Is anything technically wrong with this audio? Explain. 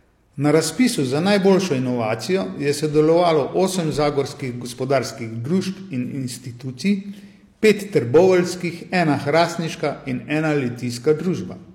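Yes. Brief crackle at 0.54 to 0.57 s, then a harsher fuzz from 7.65 to 8.25 s, are hard clipping. The speech peaks exceed what a stage can pass, by about 2 dB and about 4 dB, so their tops are sliced flat, spraying high harmonics.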